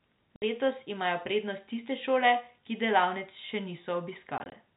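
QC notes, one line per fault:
0.36 to 0.42 s: packet loss filled with silence. The speech drops out for a solid 60 ms, which fits three 20 ms packets lost in a row. Silence replaces them, so the audio stops abruptly at hard edges.
4.38 to 4.52 s: packet loss filled with silence. About 60 ms goes missing in short holes scattered across roughly 180 ms. No hole lasts longer than 20 ms, which points to single packets dropped apart. Each gap is filled with silence, so the speech sounds chopped.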